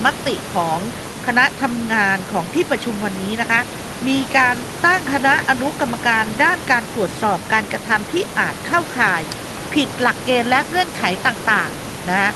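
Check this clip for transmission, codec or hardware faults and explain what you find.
Nothing here points to a transmission, codec or hardware problem: the speech sits about 13 dB above the room's own background noise, and the top end rolls off around 12 kHz, just what you'd expect from a normal Opus call path.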